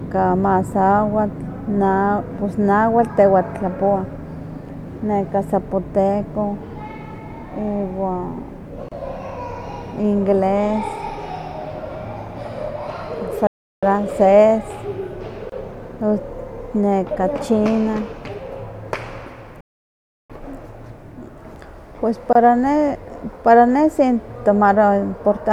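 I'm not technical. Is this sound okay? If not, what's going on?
No. There are two kinds of fault.

The first is a gap at a join of encoded pieces. The recording was saved as separate chunks and then stuck back together. Each chunk kept a sliver of silence at its edges. So the speech briefly drops out, for about 25 to 30 milliseconds, at 8.89 s, 15.50 s and 22.33 s. The last one comes just before "ne para ne". The edges of each gap are smeared rather than sharp. The speech then picks up exactly where it left off.

The second is a playback stall. The speech stops dead in mid-flow, then resumes where it stopped. This happens at 13.47 to 13.83 s, about a third of a second, and at 19.61 to 20.30 s, about 0.7 seconds. These pauses are much longer than the gaps at the joins. The likely cause is the player running short of data, or getting held up, and going quiet until it caught up.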